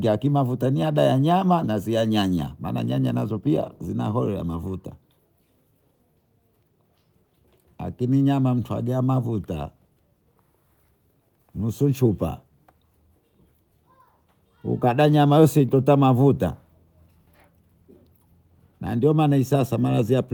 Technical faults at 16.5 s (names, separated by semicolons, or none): none